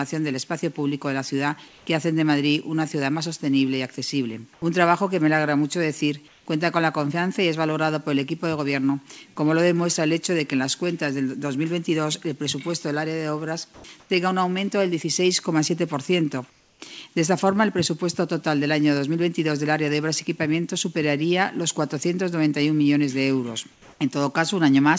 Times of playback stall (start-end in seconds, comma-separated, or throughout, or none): none